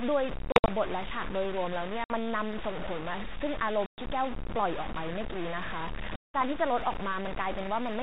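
Speech runs with a coarse, gritty distortion throughout that rises and falls with the talker and crushes the quiet tails into sputter, a sign of low bit depth without dither, likely from truncation to about 4 bits, leaving the error only modestly below the speech. The narrow telephone band points to a 32 kbit/s G.726 ADPCM call, and there are four hard-edged dropouts from packet loss on an ADPCM call: 0.52 to 0.69 s (120 ms lost in bursts), 2.04 to 2.15 s (60 ms), 3.86 to 4.01 s (120 ms) and 6.17 to 6.42 s (180 ms). After each hole the decoder's predictor and step size no longer match the sender's, so the speech comes back with a brief distorted edge before settling.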